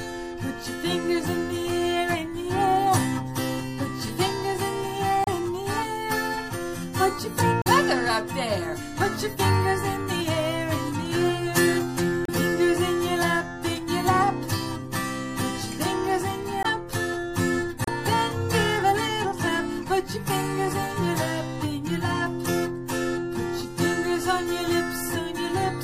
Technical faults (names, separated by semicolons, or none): MP3 compression; damaged data in a compressed stream